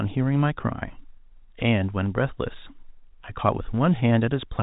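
No faults can be heard anywhere in this speech clip. It carries the G.711 telephone coding sound, with nothing above about 3.8 kHz and only a faint level-following hiss from the 8-bit logarithmic quantisation.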